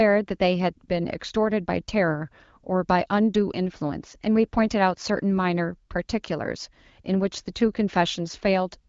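Nothing in this speech recording stood out as a technical fault on listening.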